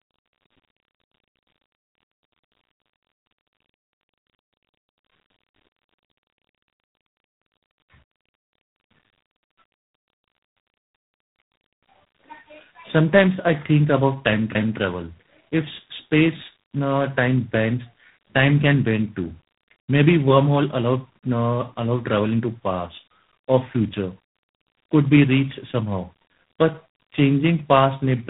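Throughout, tandem speech coding, likely two low-rate speech codecs in series, re-encodes already degraded speech, leaving it rough, muffled above 3.9 kHz, and warbly.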